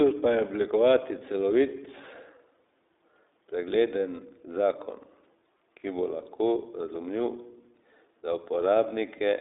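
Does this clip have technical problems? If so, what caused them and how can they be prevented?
Yes. Across the whole clip, the speech was carried by the iLBC codec, a narrowband VoIP coder that encodes each 20 ms frame's excitation independently of the previous frame. A telephone-style band limit of about 300 Hz to 3.7 kHz, with nothing above 3.8 kHz, makes the speech sound thin and muffled. The codec damage is plainly audible as a rough, slightly synthetic texture, which fits the 15.2 kbps iLBC mode. To prevent it, record and transmit with a wideband codec such as Opus instead of iLBC.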